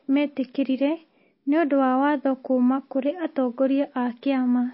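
From start to finish, the speech carries plainly audible codec damage, most likely from MP3 compression. Nothing is heard above 5.6 kHz. The treble stops at that fixed point, so s sounds lose their edge and turn dull. Weak frequency lines drop in and out between frames. That gives the sound a watery, swirling texture. Consonant attacks smear. The damage points to a very low bitrate, around 24 kbps.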